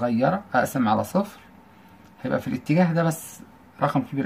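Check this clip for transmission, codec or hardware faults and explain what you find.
Nothing stood out on listening to this clip.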